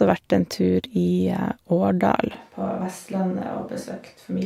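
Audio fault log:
2.35 s to the end, switch to a distant microphone: the speech abruptly turns roomy, hollow and bass-light, about 5 dB quieter, likely because the close microphone dropped out. The waveform steps down, and the spectrogram loses low energy while pauses fill with faint room noise.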